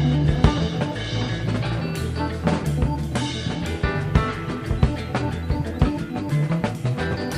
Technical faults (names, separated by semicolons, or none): none